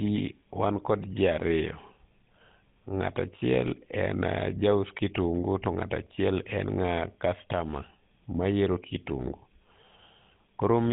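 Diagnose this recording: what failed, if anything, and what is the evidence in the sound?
GSM full-rate codec damage runs through the whole speech clip at the codec stage: plainly audible buzzy, gravelly roughness and nothing above 3.8 kHz, which fits the 13 kbps full-rate coder, whose pulse excitation is only sparsely sampled and then drives a vocal-tract model.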